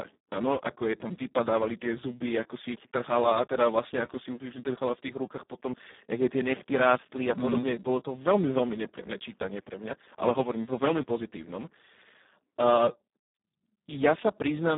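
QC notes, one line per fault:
Throughout: Speex codec damage. The speech is heavily hoarse, buzzy and close to robotic. Too few bits describe the excitation, which fits a setting near 4 kbps. The band runs from about 200 Hz to 3.7 kHz, with nothing above 3.8 kHz.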